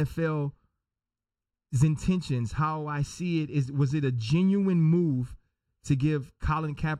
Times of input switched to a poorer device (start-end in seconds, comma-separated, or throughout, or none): none